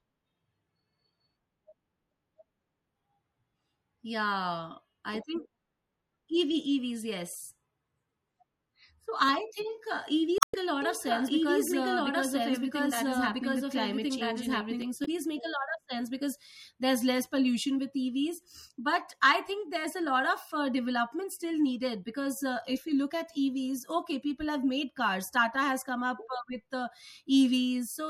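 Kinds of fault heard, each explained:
MP3 compression: Throughout the clip the speech has a watery, swirling quality, with sibilants turning metallic and chirpy and consonant onsets smeared. The likely cause is MP3 encoding at a low bitrate, around 64 kbps. The encoder runs short of bits, so it cuts the treble and drops quieter frequency detail that flickers in and out from frame to frame. On a spectrogram this shows as a flat ceiling across the top of the band, with speckled, patchy holes below it.
Damaged data in a compressed stream: At 10.38 to 10.55 s, right after "think uh", and again at 15.02 to 15.08 s, brief glitches break through the speech. Part of the stream was corrupted, so the decoder misread those frames, lost sync and skipped forward to the next valid frame header. A waveform shows a short disruption at each spot. A spectrogram shows a brief break in the speech pattern at the same moment.
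Doubled audio track: From 10.82 to 14.82 s, a second full-band copy of the speech runs behind the original by about one and a half seconds, at roughly the same level. It has no decay or room colouring, and it starts and stops abruptly. The likely cause is the same audio being mixed in twice, either through a second, slower capture path or through an edit that holds two copies out of step. On a spectrogram, the speech patterns appear twice, offset in time and equally bright.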